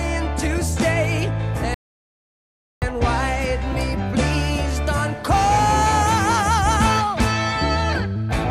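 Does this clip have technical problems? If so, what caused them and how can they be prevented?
Yes. A rebuffering stall runs from 1.74 to 2.82 s: playback ran out of downloaded audio, went silent, then resumed exactly where it stopped, adding 1.08 s. A larger playback buffer or a lower bitrate on slow connections would prevent it.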